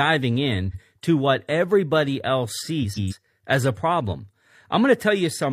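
Speech with two places where frames are out of order. At 0.69–0.80 s two neighbouring blocks of about 46 ms swap places, and at 2.83–3.13 s two blocks of about 139 ms do the same. Each stretch plays with its halves exchanged, giving a brief garbled flutter with no time lost. On a waveform or spectrogram, the envelope and harmonic contours jump abruptly at those seams instead of flowing continuously.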